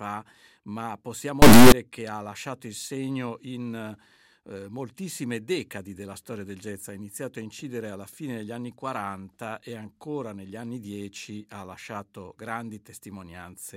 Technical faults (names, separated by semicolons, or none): integer read as float